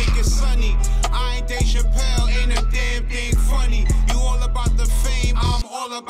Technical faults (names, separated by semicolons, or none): none